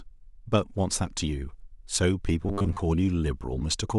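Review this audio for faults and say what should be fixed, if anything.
From 2.44 to 2.78 s the speech turns into a rigid, metallic buzz pinned at 100 Hz, the robotic sound from repeated short buffers. The cause is likely audio arriving too seldom, so the software kept replaying a 10 ms slice while roughly half the real audio was skipped. Unlike a plain dropout, there is no gap. Unlike a stutter, the repeats are too short to hear as separate echoes and fuse into a steady tone. To prevent this, give the playback path a deeper jitter buffer or steadier packet delivery.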